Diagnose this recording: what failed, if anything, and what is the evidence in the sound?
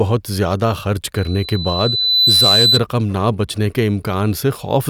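The acoustic loop between the loudspeaker and the microphone feeding it closed with more than unity gain at one frequency, a loudspeaker feedback squeal in the analogue reinforcement path. From 1.15 s a pure tone near 4 kHz appears over the speech and swells for around a second until it sits roughly 5 dB above it. It holds there until it stops at 2.8 s, which suggests the loop was broken or the gain pulled down at that point.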